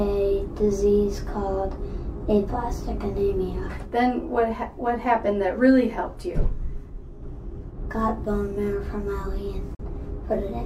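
At 9.75 s a digital broadcast dropout mutes the sound with a quick fade. It returns at 9.83 s. The gap fits one corrupted frame being discarded.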